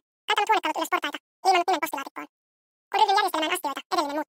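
Audio read two samples at a time (double speed) runs through the whole clip: pairs of samples are taken as single frames, as if the data held two channels or double-width samples, so everything plays at twice the speed and 12 semitones higher.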